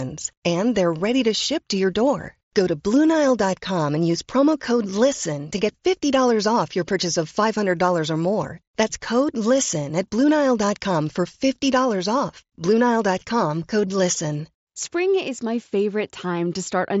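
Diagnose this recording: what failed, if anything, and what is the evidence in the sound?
Nothing failed: the speech arrives intact through a Bluetooth mSBC headset path, whose wideband coding leaves nothing above about 7.7 kHz and adds only a light graininess on louder syllables, which fits that link working as designed.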